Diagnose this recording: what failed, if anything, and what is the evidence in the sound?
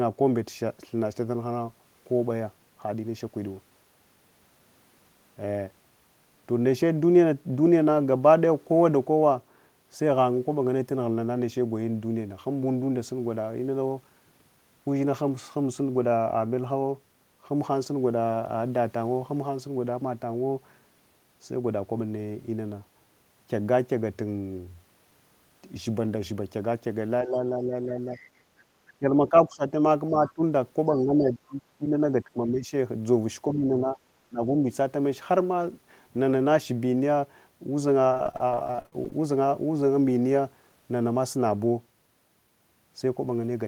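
Call processing, speech suppressed in double talk: between 27.23 and 34.65 s the talker's level dips in four stretches (27.23–28.08, 28.99–30.41, 30.99–32.72, 33.5–34.65 s). The deepest drops are roughly 5 to 20 dB, and each affected stretch totals from a few hundred milliseconds to about a second. The likely cause is the echo canceller mistaking simultaneous far-end activity for echo and attenuating the near-end speech. On a waveform the envelope sags abruptly, and a spectrogram shows energy, especially high bands, thinning in blocks.

Call processing, the other side's voice leaking through: brief faint bursts sit at 28.14–28.29, 30.27–30.33 and 30.9–31.0 s, about 25 to 30 dB below the main speech, interleaved with the suppression episodes. This is likely residual loudspeaker echo that the canceller failed to subtract from the microphone path. A spectrogram shows faint, separate harmonic traces overlapping or just after the near-end speech. 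On a waveform they barely lift the floor.

Network, repeated packet loss (robotic sound): from 38.09 to 39.27 s the audio turns choppy, with about two dozen short gaps, the longest 56 ms. Roughly 38% of that span is synthetic fill, and about 360 ms is simply missing. The receiver keeps extending the last waveform into each hole, so a spectrogram shows smeared, repeated harmonic slices and vertical seams. The waveform has periodic stretches and dropouts.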